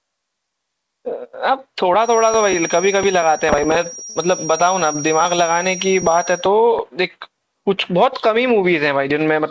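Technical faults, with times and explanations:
1.96 to 6.5 s, feedback whistle: A thin, steady whistle at 5.7 kHz sits behind the speech, swelling and fading slowly in level and staying roughly 15 dB below it. The likely cause is a loudspeaker-to-microphone loop held just at the edge of feedback, so one frequency rings without building up. On a spectrogram it shows as a single bright horizontal line at 5.7 kHz, inside the call codec's band, which stops at 8 kHz.
4.10 to 4.17 s, short stall from a late packet: A packet arrived late and the jitter buffer ran dry, so the receiver stretched the last sound for 56 ms until the packet came. It then resumed from the same point, so nothing is lost, but the speech is held too long with a faint buzz or dip, and everything after it runs 56 ms later. On a spectrogram this appears as a short block of repeated, smeared frames. On the waveform it shows as a brief repeating pattern or a slight dip in level.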